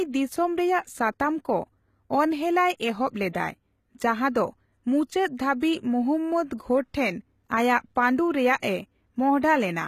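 From the start, the speech carries HE-AAC compression damage, likely from a low-bitrate encode in the region of 20 kbps. The treble is rebuilt from copied lower bands, so s sounds turn gritty and lispy. A spectrogram shows smeared, blocky upper bands ending sharply at 14.9 kHz.

From 6.57 to 6.60 s, a pre-echo precedes a sharp attack. The codec's quantisation noise spreads across the block into the quiet just before the onset, producing a 27 ms hiss and a softened attack, visible as faint noise on the waveform before the transient.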